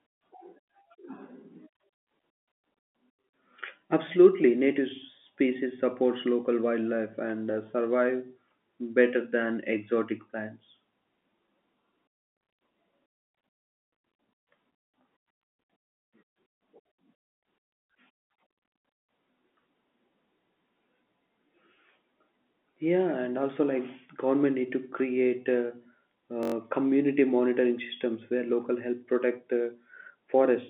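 At 26.43 s there's a system hang loop: the system stalled and the sound hardware kept replaying one 21.33 ms slice, which fits a 1024-sample buffer, five times over until 26.54 s. That gives a brief buzz at 46.9 Hz over the telephone-band speech, with next to no audio actually lost.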